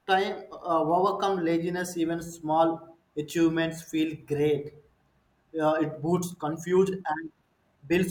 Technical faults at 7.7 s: time-stretched section

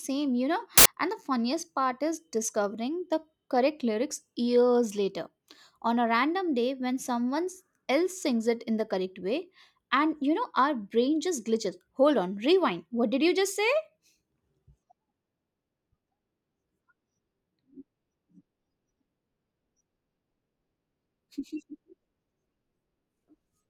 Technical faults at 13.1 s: none

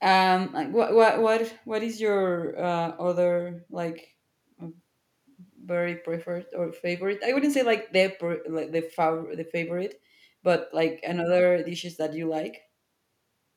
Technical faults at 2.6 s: none

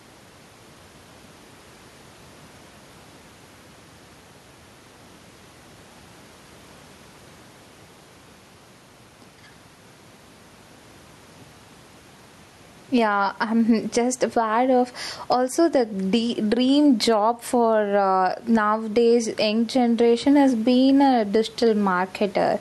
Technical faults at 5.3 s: gain pumping

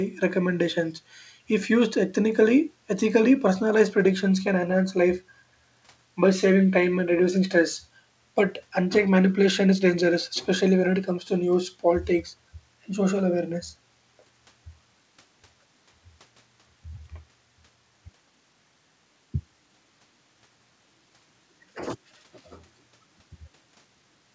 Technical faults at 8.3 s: none

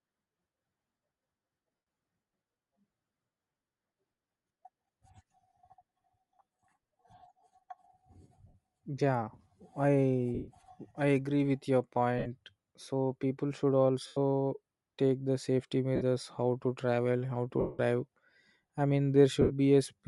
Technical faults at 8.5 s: Bluetooth LC3 compression; lost LE Audio frames

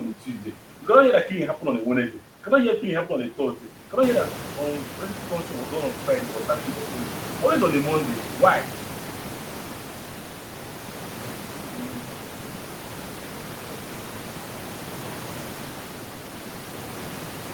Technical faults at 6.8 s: none

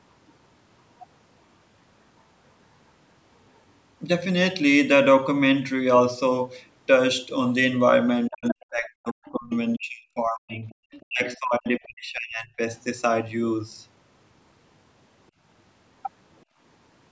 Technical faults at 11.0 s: other side's voice leaking through; speech suppressed in double talk

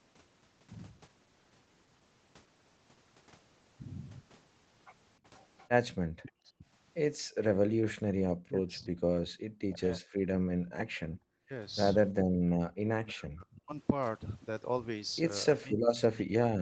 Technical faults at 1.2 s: none

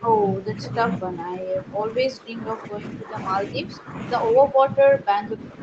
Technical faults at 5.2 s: speech suppressed in double talk

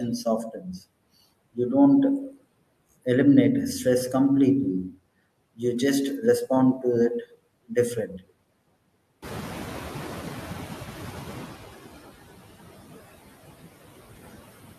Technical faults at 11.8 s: noise suppressor artifacts; noise suppressor catching up

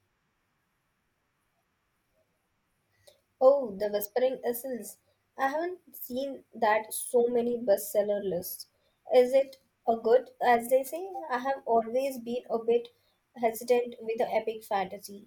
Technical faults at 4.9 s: none

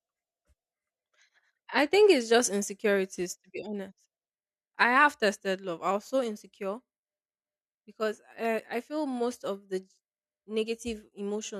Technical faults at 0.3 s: none

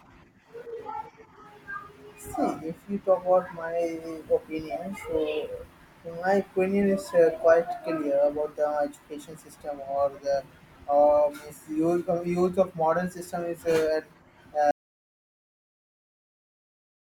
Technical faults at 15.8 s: audio dropout to silence

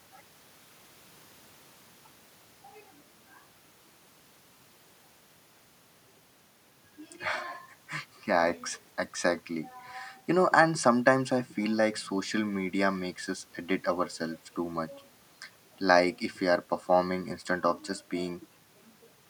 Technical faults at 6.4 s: none

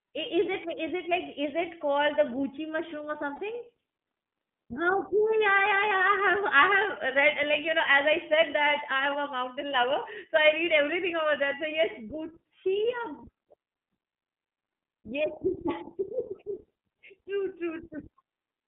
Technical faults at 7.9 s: iLBC codec

